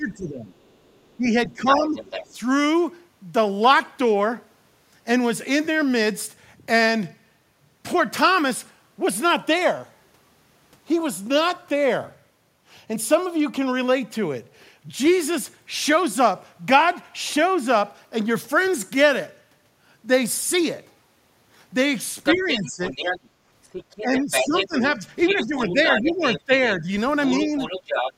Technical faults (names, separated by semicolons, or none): speech suppressed in double talk; other side's voice leaking through